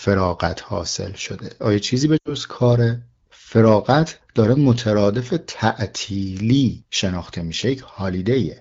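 From 2.17 to 2.34 s the speech is hit by lost AMR speech frames. Corrupted frames failed their checks, so the decoder repeated the last good pitch and vocal tract settings while lowering the gain. The sound briefly smears and fades instead of cutting, which fits about four 20 ms frames lost. Because this is wideband coding, the fade is quick, and speech at a quality that fits AMR-WB around 12.65 kbit/s resumes after, weak or rough for a moment before it clears.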